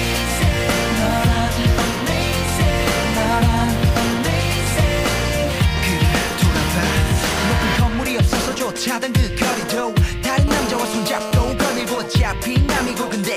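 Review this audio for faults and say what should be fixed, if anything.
A hard, raspy buzz at 217 Hz, rich in harmonics, holds steady from 10.48 to 11.52 s at about 9 dB below the signal. This is GSM phone buzz: a nearby 2G phone on a call transmits in bursts 217 times a second, and the circuitry rectifies those radio pulses. Keep phones switched off or in flight mode, well away from microphones, cables and preamps while recording.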